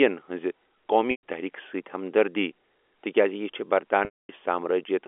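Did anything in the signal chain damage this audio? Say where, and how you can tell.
Yes, on the network side: packet loss with pitch repetition, heard against a band-limited 300 Hz to 3.4 kHz G.711 line. At 1.11 to 1.21 s about 120 ms went missing, and the receiver looped the last pitch period so the sound hangs on a held, buzzy tone. At 4.05 to 4.29 s, right after "ہمدردی تِکیازِ یہِ چھےٚ", a 240 ms gap outlasts the repeat, which fades to silence before the audio cross-fades back in.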